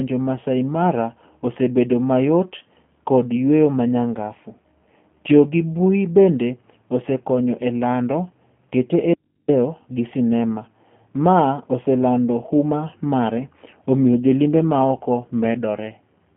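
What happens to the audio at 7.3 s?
At 7.3 s, as throughout, the speech passes through G.729 coding, which fits an 8 kbit/s stream. Modelled pulses rebuild the voice within 150 Hz to 3.4 kHz, so it sounds plainly rough and synthetic.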